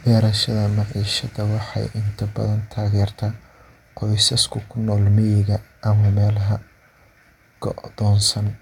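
No technical faults can be heard anywhere in this speech.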